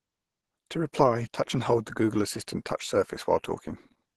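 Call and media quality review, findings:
Speech muffled and hoarse throughout the clip, with grainy, rough texture and plainly audible codec damage. Top end present. Likely Opus compression in hybrid mode: a SILK speech core below with CELT band-filling above, super-wideband. Bits too scarce to code band detail, hence the hoarse, noisy fill, which fits a stream of about 16 kbps.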